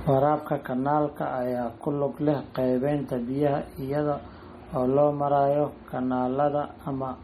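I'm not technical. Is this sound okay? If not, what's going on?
No. Throughout the whole recording the speech has a watery, swirly quality, and the s sounds come out metallic and chirpy. That is MP3 compression, likely squeezed hard to make the file small. What sets it apart from a simple dulling filter is that the fizzy, bubbling texture comes and goes from moment to moment, while the treble is cut off cleanly at about 16.6 kHz.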